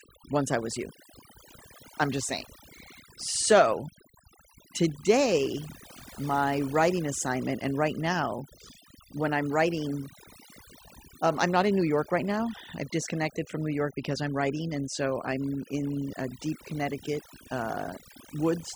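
From start to finish the speech carries overdone noise removal: a noise reducer set far too aggressively has pulled individual frequency bands down or out whenever they came close to its noise estimate, taking the softer parts of the voice along with them. The pauses fall to near silence sprinkled with twinkling specks. Unlike a noise gate, which shuts everything at once, this damage is band by band and continues inside the speech.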